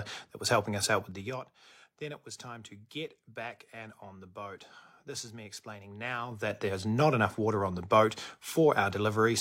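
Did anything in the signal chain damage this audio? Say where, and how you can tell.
Yes. Zipper noise appears twice: a ticking, zipping texture from 1.02 to 1.49 s as the level drops by about 15 dB, and again from 6.22 to 6.60 s as it rises by about 15 dB. The clicks come around ten times a second. The damage is at the gain stage: the level is changed in coarse 3 dB and then 4 dB jumps, with no smoothing between them, so every step leaves an audible click.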